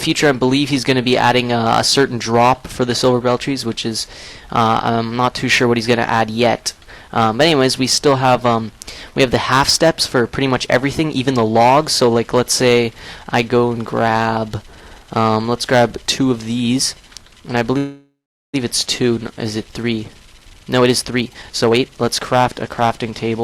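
From the start to the end, hard clipping: the signal overdrives a stage by about 11 dB, so its loudest peaks, around 1.5 percent of samples, are sliced flat. Each peak crackles with harsh fuzz, and a waveform shows flat-topped plateaus while a spectrogram shows bright harmonic smears reaching high up.

From 17.77 to 18.56 s comes a call audio freeze. The last sound carries on as a fading buzz, then drops to silence for about 0.41 s before the audio resumes where it stopped, with nothing missing. This is likely a jitter buffer running empty while packets were delayed. The spectrogram shows a smeared, repeating band thinning to a blank gap, and the timeline now runs 0.76 s later.

From 19.83 to 23.36 s there is a jitter buffer speed-up: the receiver trims short pitch-period slices over and over, removing about 0.7 s, so the audio plays at 122 percent speed with unchanged pitch and sounds hurried. 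The waveform shows compressed events with tiny splice seams.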